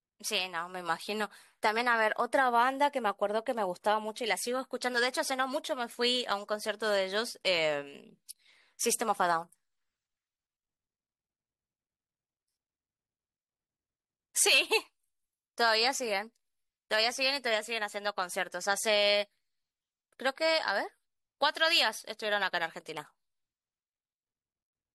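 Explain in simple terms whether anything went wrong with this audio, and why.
Nothing went wrong here: the speech recording holds steady throughout, with no dropouts, glitches or other technical problems to be heard at any point.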